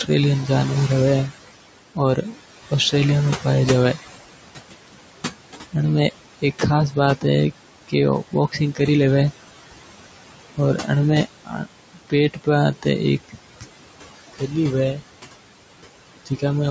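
A speech recording made through a call microphone chain, with room noise sitting about 13 dB below the voice and nothing above 8 kHz. It shows noise suppressor artifacts throughout. Between phrases the background sinks by about 18 dB, then swells back under the voice. This pumping, tied to where the voice starts and stops, is what separates it from a steady low-pass or codec smear. Everywhere else the noise would stay constant. The suppressor also cuts speech. Within the stretches 0.04–3.95 s, 4.88–8.8 s, 10.56–14.51 s and 16.26–16.43 s, quiet consonants and word tails are pulled down with the noise, by about 13 dB in the first and last and about 18 dB in the middle two. The affected portions add up to roughly a third of a second, under half a second, around 0.7 s and about a tenth of a second. These losses sound swallowed rather than silent, and the room noise drops along with them. That distinguishes them from packet dropouts, which would leave hard gaps or clicks in the middle of loud syllables.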